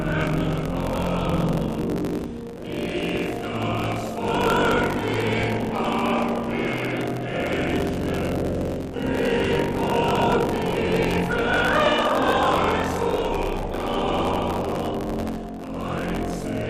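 Buffer tearing runs throughout: the writer and the playback hardware have slipped, so roughly a third of each buffer replays audio from around 70 ms earlier, hard-spliced on both sides. The result is a steady robotic buzz at 46.9 Hz, which fits a 1024-sample buffer.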